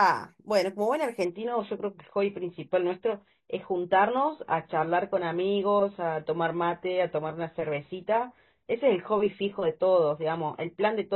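At 1.25 s the speech suddenly loses its treble, with no gap. This is an adaptive stream at a lower bitrate. The connection slowed, so playback switched to a leaner version. Nothing remains above 4.1 kHz. Codec artefacts rise, which fits a drop to roughly 16 kbit/s AAC. This lasts to the end.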